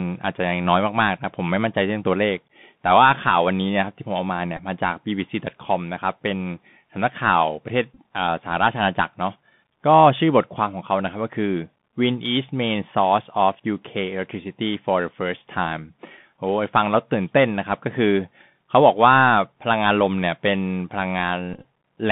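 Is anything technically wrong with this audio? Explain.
Yes. The speech runs through a Bluetooth CVSD headset codec for the whole clip, and Bluetooth headset packet repeats occur at three points.

The CVSD codec, which fits a 64 kbps link, codes each sample as a single up-or-down step whose size adapts. The band sits between 150 Hz and 3.6 kHz. A plain telephone band-limit would sound clean, but here s sounds turn scratchy where fast high energy outruns the step, and a granular hiss lies under the speech.

The packet repeats occur at 4.57 s, from 7.94 to 7.99 s, and from 21.53 to 21.65 s. Lost packets were replaced by decoding the previous packet's bits again. The first is a 15 ms run of repeats. It and the later ones, with repeat runs up to about 10 and 20 ms, give a short buzz near 267 Hz from the 3.75 ms repetition rather than the silent gap of a simple dropout.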